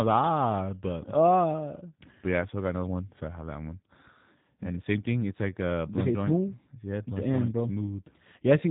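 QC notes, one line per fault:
throughout, G.729 codec: speech sounds thin, slightly rough and synthetic because a low-rate coder, one that fits 8 kbit/s, rebuilds it from a vocal tract filter, pitch prediction and sparse pulses. On a spectrogram nothing appears above 3.8 kHz, and harmonics look smeared and blocky.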